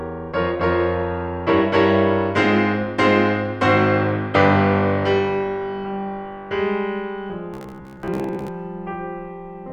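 It's a music clip, and near the end, from about 7.54 s to 8.50 s, it picks up a robotic sound from repeated short buffers. The music collapses into a stiff, metallic buzz locked at roughly 66.7 Hz, which lines up with a 15 ms chunk being looped over and over. About half the material there seems to be repeats rather than new audio, so the likely cause is a playback buffer starving and the software papering over the gaps.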